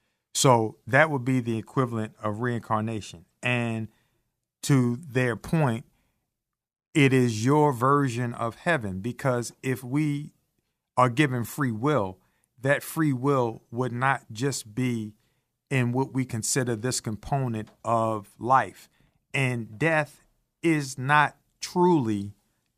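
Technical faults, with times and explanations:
No technical faults can be heard anywhere in this speech recording. There is nothing to list by time or to explain.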